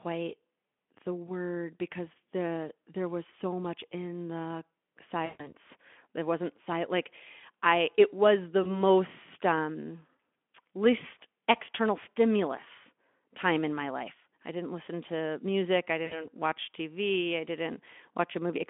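VoIP packet loss concealed by the speech codec at 5.26–5.53 s (about 140 ms lost), 8.63–8.71 s, 10.17 s and 16.05–16.20 s: the decoder extrapolates the last pitch into a fading buzz, and the speech stays weak briefly afterwards.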